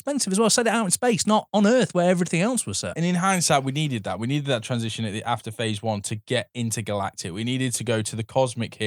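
No technical faults can be heard anywhere in the speech recording, and the signal stays intact and continuous throughout.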